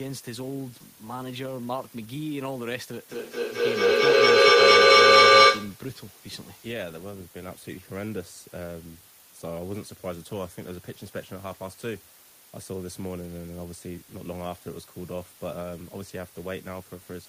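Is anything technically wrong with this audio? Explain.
Yes, there are two faults.

Throughout the clip a constant, even hiss sits close under the speech, only about 15 dB below it, with no crackle or grit. This is low bit depth with dither. The audio carries just 6 bits, and noise was added before each sample was rounded to so few levels. The dither turns the rounding error into steady white noise instead of distortion that would follow the speech.

From 3.09 to 5.89 s, the speech returns again and again at a fixed spacing of roughly a fifth of a second. Each pass sounds thinner and more ringing, and the repeats build up instead of fading, peaking about 18 dB above the speech itself. This is feedback echo between two devices. Two devices in the same room were on one call. One played the other's audio aloud, and that microphone picked it up again. Each echo canceller removes only its own device's playback, so the loop kept circulating and growing.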